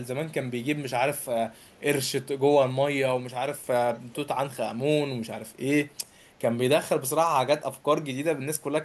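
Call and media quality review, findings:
Echo leak, 3.93–4.16 s. Far-end echo canceller likely missed part of its loudspeaker signal picked up by its microphone, sending it back down the line. Heard as a brief, faint copy of the speech, 458 ms late, well below the direct level.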